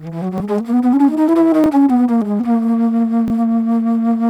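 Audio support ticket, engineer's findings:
Repeated buffer, three brief stutters at 0.38–0.40 s, 1.64–1.66 s and 3.28–3.30 s. Each is a 20 ms slice played twice with a hard join, length fits a 20 ms playback buffer. Output device underran, last block replayed, about 20 ms of new audio lost each time. Distinct from a dropout: no silent gap, just an exact duplicate. Distinct from concealment: no smearing or fade.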